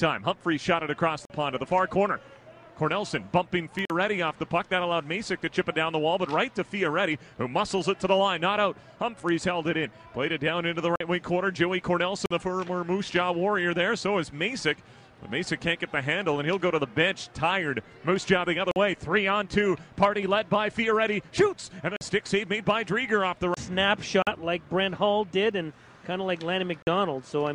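Two single sharp clicks stand out, at 3.79 s and 7.78 s, each a thin vertical line through the spectrum with no gap in the sound. The likely cause is dropped samples: a fraction of a millisecond missing, making the waveform jump abruptly.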